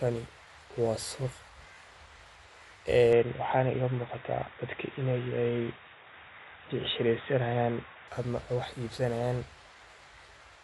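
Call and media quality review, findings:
Throughout: dull, band-limited speech, nothing above 11.5 kHz, rough fluttering noise around tones; likely Dolby Digital compression, fitting roughly 64 kbps, with unbitted lines dither-filled.

3.13 to 8.08 s: sudden narrowing to nothing above 3.8 kHz, faint new noise floor, no gap or level jump; likely input switched to a poorer device.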